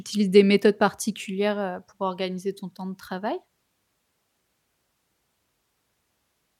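Across the whole recording of speech, nothing technically wrong can be heard in the signal.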